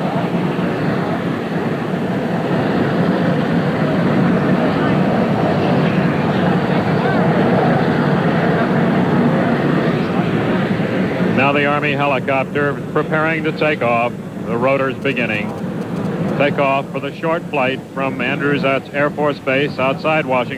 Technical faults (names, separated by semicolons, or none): GSM signalling bursts